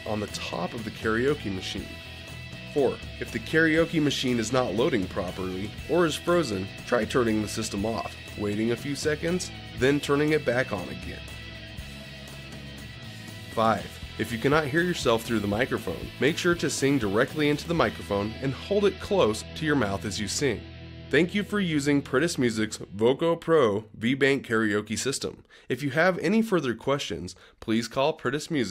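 No technical faults can be heard anywhere in this clip. There is nothing to place in time or to explain.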